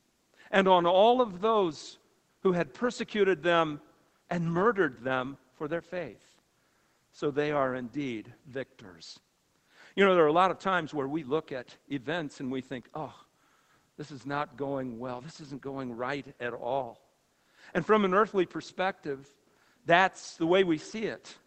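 No technical faults are audible.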